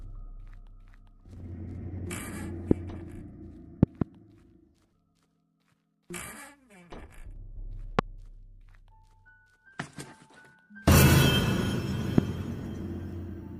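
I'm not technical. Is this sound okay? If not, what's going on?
No. There is a loud pop at about 2.71 s, 7.99 s and 12.18 s, and two quick pops between 3.83 and 4.04 s. The sound carries on underneath each pop without stopping, so this isn't a dropout. It's most likely a sudden electrical jolt, such as a plug or switch.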